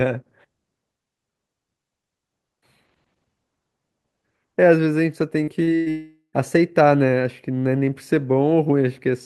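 At 5.43 s and again at 5.63 s there's short concealed packet loss. About 40 ms went missing each time, and the decoder covered it by stretching out the preceding sound, which leaves a quick smear. Right after, at 5.75 s, comes a burst of packet loss. Around 120 ms never arrived in time, and the gap is bridged by a continuation of the last sound that turns down as it goes, before the audio jumps ahead. Then from 5.90 to 6.36 s the sound drags on as a fading continuation of the last sound and drops to about 100 ms of silence before returning, with roughly 440 ms of the clip gone. That's most likely a long network dropout on the Opus call path.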